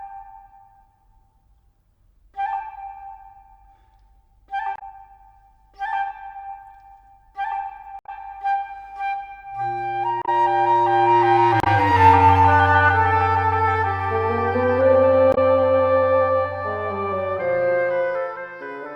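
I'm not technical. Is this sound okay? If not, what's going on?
No. The audio has damaged data in a compressed stream: parts of the file were corrupted, so the player lost its place and had to search for the next readable chunk. You hear brief chirps or blips, each a tenth of a second or less, at about 4.74, 7.99, 10.22, 11.60 and 15.31 seconds.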